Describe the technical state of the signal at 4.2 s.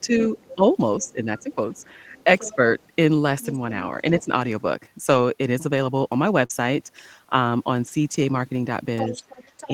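Speech suppressed in double talk runs from 4.18 to 4.29 s, a brief dip of around 5 dB. The likely cause is both ends talking at once, so the echo canceller mistook the talker for loudspeaker echo and turned the speech down.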